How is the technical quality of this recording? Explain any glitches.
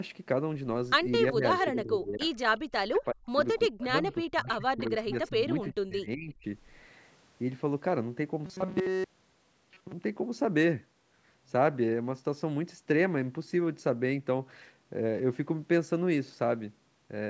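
The recording has three kinds of call-processing fault, all within the first ten seconds.

From 1.32 to 2.39 s, 2.57 to 3.38 s and 3.69 to 6.45 s, the speech dips and breaks up, falling about 25 dB and once about 40 dB. This is speech suppressed in double talk, likely from an echo canceller turning everything down while both sides spoke.

At 3.79 to 3.84 s, 4.79 to 4.90 s and 5.10 to 5.29 s, faint delayed scraps of voice, about 20 to 25 dB down and 370 ms late, appear. This is echo leak, likely loudspeaker pickup the canceller failed to remove.

From 8.46 to 9.93 s, the speech becomes a rigid metallic buzz at 188 Hz. This is robotic sound from repeated short buffers, likely one roughly 5 ms chunk looped in place of missing audio.

The band stops at 8 kHz, as expected from call microphone processing.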